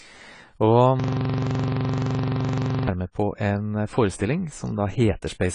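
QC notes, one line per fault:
Throughout: AAC compression. The speech sounds dull and smeared, with nothing above 10 kHz and a warbling, fizzy texture on sibilants and held sounds. The likely cause is low-bitrate AAC-LC coding, consistent with about 24 kbps, which cuts the top band and starves the rest.
1.00–2.88 s: system hang loop. One 42.67 ms slice of audio repeats exactly, over forty times, giving a rough buzz at 23.4 Hz. The system froze while the sound hardware kept replaying the same ring buffer. The loop length fits a 2048-sample buffer.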